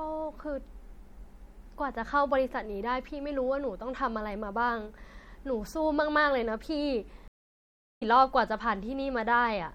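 Throughout, the speech sounds watery and swirly, with chirpy s sounds and dulled treble, while weak detail flickers frame to frame. This is likely MP3 compression, at a rate that fits about 64 kbps. From 7.28 to 8.03 s, a stream reconnect leaves 0.73 s of silence, then the speech resumes roughly a second later. Content is skipped, unlike a dropout that resumes where it stopped.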